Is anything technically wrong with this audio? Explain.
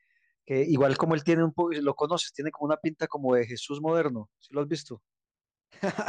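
No, nothing technically wrong stood out on listening to this speech clip.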